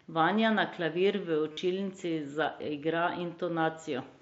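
At 1.53 to 1.57 s, concealed Bluetooth headset packet loss fills a 45 ms gap. The receiver repeats recent waveform, producing a brief buzzy held tone and slight warble on recovery, consistent with about six lost packets over the light-grained mSBC wideband link.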